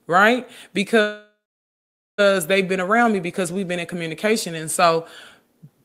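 Speech, with a call audio freeze from 1.01 s to 2.20 s. The last sound is stretched into a fading buzz or hiss before going silent for roughly 0.84 s, and the talker resumes at "they've been around me" exactly where they left off. Nothing is lost, but about 1.17 s of gap is inserted, pushing everything after it later. The likely cause is packets delayed in transit, draining the receiver's jitter buffer until they arrived.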